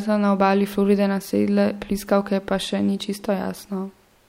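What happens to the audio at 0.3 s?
Nothing goes wrong at 0.3 s; the speech carries on intact through that moment, with no dropout, click or distortion.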